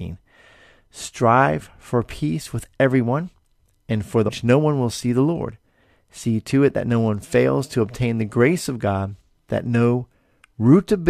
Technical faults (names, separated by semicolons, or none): stream segment skipped